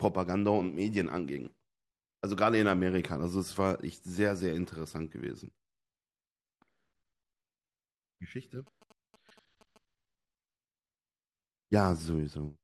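From 8.67 to 9.78 s a galloping dit-dit-dit of brief buzzes sits roughly 25 dB under the speech, the buzz pitched near 217 Hz. These are GSM signalling bursts: short radio bursts from a nearby 2G phone, rectified by the audio circuit.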